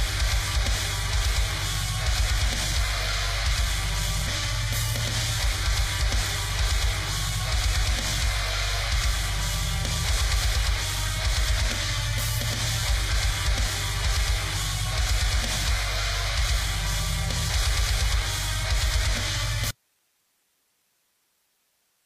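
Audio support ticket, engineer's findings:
Audio dropout to a faint residue, 19.71 s to end of clip. Signal cuts abruptly, leaving only hiss roughly 45 dB down. Likely an upstream source or link failure with the downstream path still live. Abrupt edge and persistent hiss rule out a fade or a dead output.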